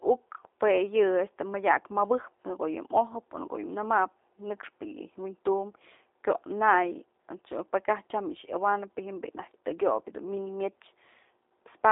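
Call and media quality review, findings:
Speech rough, buzzy and slightly synthetic throughout; thin, band-limited to roughly 300 Hz–3.7 kHz, nothing above 3.8 kHz. G.729 codec (G.729A variant) on the call leg: each 10 ms frame is rebuilt from a vocal-tract filter, pitch predictor and sparse pulses, which fits an 8 kbit/s stream. Coding damage plainly audible.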